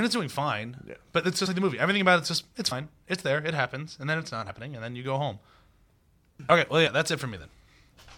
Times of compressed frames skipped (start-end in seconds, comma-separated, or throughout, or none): 1.45, 2.71, 4.48, 5.71, 6.86